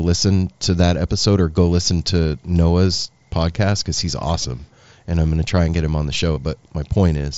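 Concealed Bluetooth headset packet loss occurs twice in this speech, from 4.42 to 4.45 s and from 6.34 to 6.37 s, each gap lasting about 22.5 ms. Voice packets from the headset never reached the phone, so the receiver filled each hole by repeating the closest-matching stretch of the preceding waveform. The patch is brief, heard as a buzzy sameness and a slight warble as real audio resumes, over the band-limited wideband headset sound.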